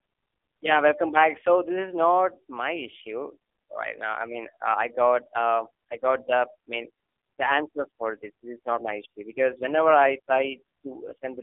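From start to finish the speech carries the sound of the AMR narrowband mobile codec, squeezed through a telephone-style band of roughly 300 Hz to 3.5 kHz. The codec rebuilds the voice from a crude vocal-tract model and a few pulses per short frame, and the heavy damage here, which points to a low mode around 5.9 kbps, leaves it buzzy, hollow and synthetic. A spectrogram shows a hard ceiling at 3.5 kHz, an empty floor below 300 Hz, and smeared harmonics.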